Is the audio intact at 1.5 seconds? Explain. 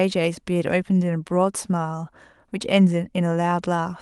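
Yes, the speech at 1.5 seconds plays through intact, with no dropout, click or other fault at that moment.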